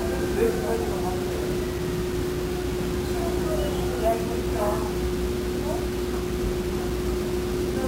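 Grainy distortion runs through the whole clip and shifts with the sound, turning quiet passages gritty. This is most likely low bit depth without dither, about 5 bits, rounded, with error roughly 15 dB below the signal. Unlike steady hiss, it follows the sound and vanishes in silence.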